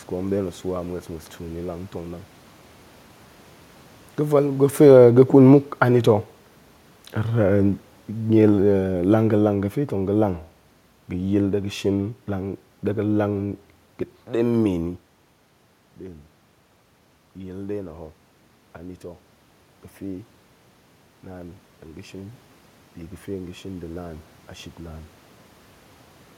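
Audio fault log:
4.71–11.56 s, automatic gain falling: the gain control eases down by about 9 dB over roughly seven seconds. The voice and room noise sink together, unlike the talker moving just before.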